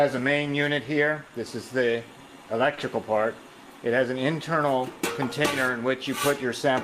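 Clock drift between sender and receiver runs through the whole clip. The sending side's clock is slow by roughly 2 percent, so samples arrive a little too slowly and the receiver's jitter buffer keeps draining. The result is a tempo that never quite settles. On a waveform, the envelope shows slightly uneven spacing. On a spectrogram, harmonic lines carry faint seams where the receiver has had to compensate.

At 1.27 s and again at 2.74 s there is a short stall from a late packet. Each lasts about 60 ms. The buffer ran dry, and the receiver held the last sound for roughly 30 ms until the data arrived, so nothing is lost. Each one is heard as a brief hold with a slight buzzy flattening. A spectrogram shows a short band of frozen, smeared partials, and the waveform shows a repeated, slightly dipped cycle pattern.

From 4.23 s to 6.74 s come repeated timing corrections. The receiver, still starved by the slow sender, keeps repeating small slices, adding about 50 ms in total. 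Playback runs at roughly 98 percent speed. On a waveform, the repeated slices appear as short duplicated cycles at uneven intervals. On a spectrogram, they show as faint vertical discontinuities scattered through the stretch.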